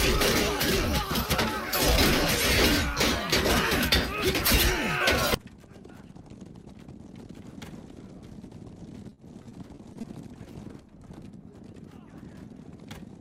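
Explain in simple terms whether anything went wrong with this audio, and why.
From about 9.09 to 10.05 s the sound turns choppy and robotic, with tiny pieces dropping out. This is repeated packet loss: seven short gaps, the longest 40 ms, were each patched by stretching the previous sound, so roughly a sixth of that stretch is filler.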